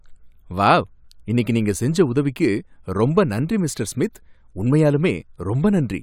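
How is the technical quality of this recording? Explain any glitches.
No glitches or transport faults are audible anywhere in the recording, so there is nothing to explain.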